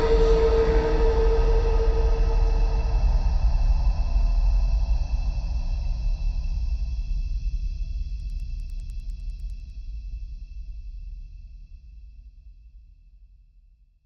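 From 8.1 to 9.7 s, the resampler restarts on every block. Each 100 ms block is converted separately, leaving edge errors. Ticks repeat at 10 Hz.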